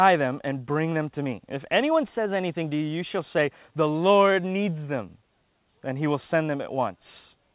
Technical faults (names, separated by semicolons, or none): clock drift between sender and receiver; repeated timing corrections